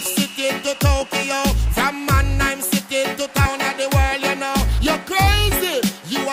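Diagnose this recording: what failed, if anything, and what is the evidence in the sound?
At 3.45 to 3.48 s the sound jumps abruptly forward. A brief blip marks the join, and the material on either side does not connect. There is no fade and no dropout to silence, just a hard splice into later programme. The stage is network delivery and playback. This is likely a stream segment skipped: one chunk of the segmented stream failed to arrive, and the player moved on to the next segment instead of waiting. The programme in that chunk never plays.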